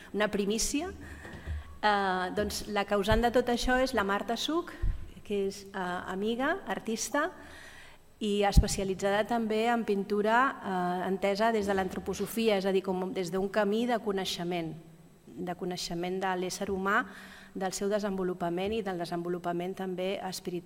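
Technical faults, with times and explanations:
3.96–4.00 s, 7.10–7.14 s and 12.29–12.34 s: damaged data in a compressed stream. Each event is a brief chirp, squawk, click or short hole of about 40 ms. Corrupted bytes in the encoded stream caused the decoder to misread or discard the affected frames and lose sync, and it then scanned for the next valid frame header. The garbled output or gap it produced while recovering is what breaks through the audio as a short disturbance.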